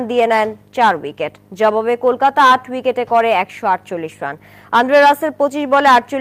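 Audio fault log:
No faults were heard in this clip. There is nothing in the audio to log here.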